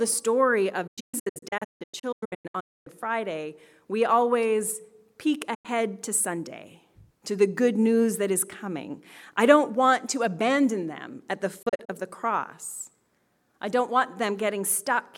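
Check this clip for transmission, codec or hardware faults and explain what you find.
Three digital broadcast dropouts occur. From 0.87 to 2.87 s the sound breaks into scattered holes, the longest 256 ms. At 5.54 to 5.66 s it mutes once. At 11.62 to 11.90 s, 32 ms gaps recur. Each time the receiver lost the signal or rejected bad frames and muted with a quick 8 ms fade. The sound sent during each gap is lost.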